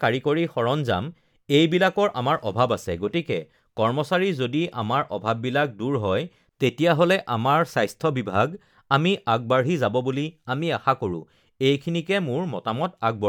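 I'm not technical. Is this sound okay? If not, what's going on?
Yes, this speech recording sounds fine. Nothing in it points to a technical problem.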